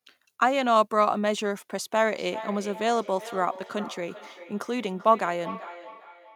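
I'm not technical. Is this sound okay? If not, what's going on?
No. From 2.14 s to the end, there's feedback echo between two devices: two devices in the same room are on one call, and each picks up the other's speaker. The speech comes back about every 0.4 seconds, as a quieter repeat.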